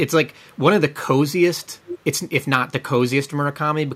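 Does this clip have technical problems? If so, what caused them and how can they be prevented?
Yes. An echo leak puts a delayed copy of the speech back into the clip, trailing the original by about 0.4 s. It is very faint from 0.33 to 0.59 s and from 1.62 to 1.67 s, then much stronger, only around 10 dB below the speech, from 1.84 to 1.99 s. The likely cause is a far end playing the call on a loudspeaker, with its echo canceller failing to remove what its microphone picked up. Using a headset there, or tuning that echo canceller, would prevent it.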